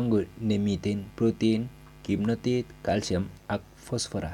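No technical faults can be heard anywhere in the speech recording, with the signal continuous and intact throughout.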